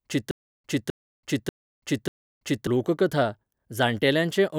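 From 0.31 s to 2.67 s the speech hits a stutter with silent gaps: a fragment of about 257 ms plays, then drops into dead digital silence for about 333 ms, and the same fragment comes back four times on a steady cycle of roughly 590 ms. The likely cause is a stalled player or stream that replayed its last buffered chunk on each retry and then ran dry, so whatever should have filled those seconds is simply gone.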